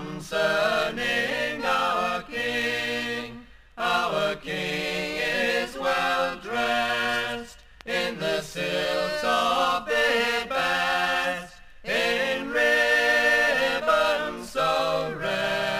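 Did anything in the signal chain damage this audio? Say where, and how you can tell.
Yes, at sample-format conversion: crude rate conversion throughout leaves an inharmonic fizz roughly 25 dB under the sound, which fits nearest-sample resampling from 48 kHz to 44.1 kHz without filtering.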